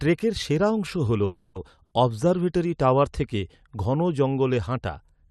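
A speech recording carried over a call path whose Opus coding limits the band to about 12 kHz. From 1.25 to 1.57 s the sound stalls: the last sound is stretched into a fading buzz or hiss for roughly 300 ms, then the speech resumes exactly where it stopped with nothing skipped. This is likely a call audio freeze, with packets delayed long enough to drain the jitter buffer, adding about 300 ms of delay. From 1.83 to 1.93 s a burst of packet loss replaces about 80 ms with a decaying held sound, and the speech picks up further on with that stretch missing.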